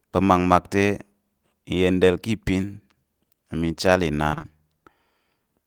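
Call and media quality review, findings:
Repeated packet loss (robotic sound), 4.29–4.46 s, right after "te mi chal": four gaps in a 0.16 s stretch, longest 26 ms, about half concealed by repeating prior audio. Jitter buffer/network path. Speech turns choppy, with pieces missing.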